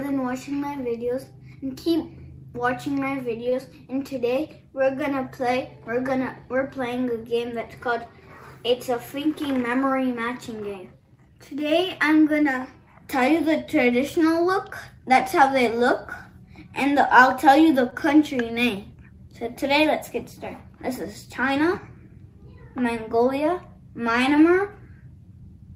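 At 3.49 to 3.55 s and again at 17.90 to 17.95 s, there is a short stall from a late packet. The jitter buffer ran dry, so the last sound was stretched by 24 ms, then 21 ms. Nothing is lost. The sound just lingers, with a faint buzz or dip.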